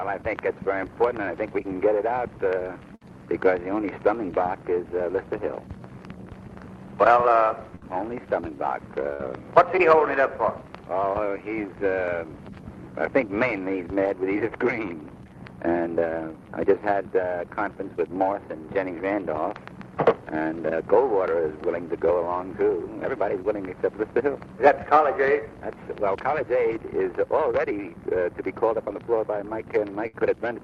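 Bursts of packet loss at 2.95–3.04, 7.75–7.84, 9.13–9.22 and 30.07–30.16 s each drop about 60 ms of audio. The receiver stretches the last sound into a fading buzz or hiss, then jumps ahead. On a spectrogram this shows as smeared, decaying bands below the 12 kHz ceiling of the call path, followed by an abrupt restart. On the waveform it appears as a shrinking repetitive patch.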